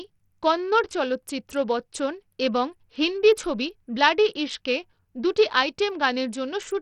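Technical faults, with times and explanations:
Throughout, Bluetooth SBC compression: the treble flickers in and out and a gritty, aliased grain clings to the speech, likely from SBC starving its upper sub-bands of bits, which fits about 64 kbps. Nothing remains above 20.8 kHz.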